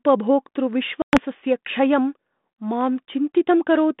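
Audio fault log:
1.02–1.18 s, packet loss on an ADPCM call: about 110 ms of the G.726 line cuts to hard-edged silence, and the audio returns with brief, slight distortion. Roughly ten packets were lost, and the decoder's adaptive predictor and step size drifted from the sender's until they re-converged.
2.81 s, dropped samples: a single sharp click. The likely cause is a few samples missing from the stream, so the waveform jumps straight to a later value. The gap is far too short to remove any sound, leaving only this discontinuity.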